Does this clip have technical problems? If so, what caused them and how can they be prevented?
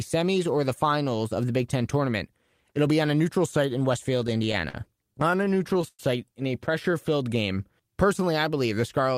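Yes. Repeated stalls (stutter) run from 4.17 to 6.00 s, starting right after "a neutral site in" and ending before "in a". Packets arrived late or more slowly than they were played, so the jitter buffer emptied 18 times across that span. At each gap the receiver stretched the last sound, fading it during the longer waits, for about 302 ms in total, or 17% of the stretch. The longest fill is 109 ms. Nothing is lost, but the speech drags and stutters. A larger or adaptive jitter buffer on a steadier, prioritised network path would prevent this.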